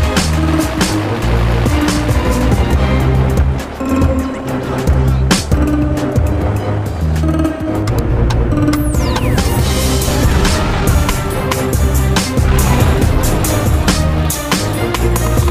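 Nothing stood out on listening to this audio.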